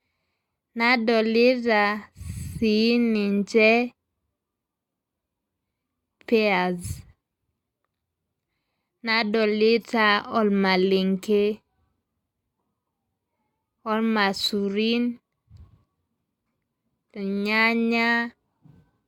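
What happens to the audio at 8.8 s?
Nothing goes wrong at 8.8 s; the speech plays through that moment intact, with no dropout, click or distortion.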